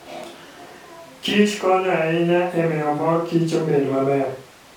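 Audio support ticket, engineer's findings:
No audible faults found in this speech recording.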